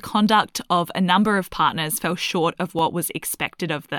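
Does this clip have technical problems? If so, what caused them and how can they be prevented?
Yes, there is one repeated buffer at 2.79 s in this speech: fresh audio arrived late, so the device played its last block once more. The repeat is so short, consistent with a 10 ms buffer, that it sounds like a brief click or buzz rather than a stutter, and almost nothing is lost. Giving the playback path a larger buffer or keeping the feeding process from stalling would prevent it.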